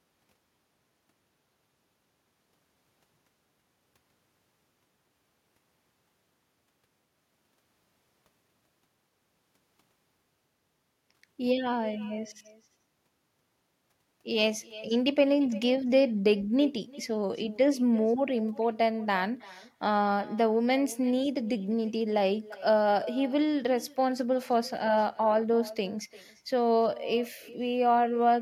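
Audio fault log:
throughout, echo with no canceller: each phrase of the speech comes back roughly 300 ms later as a quieter copy, about 20 dB down, sounding thin. The far end plays the call on a loudspeaker, its microphone picks that up, and nothing removes it before the signal returns. On a spectrogram, every syllable has a faint twin shifted right by that gap. The waveform shows small trailing bursts filling the pauses.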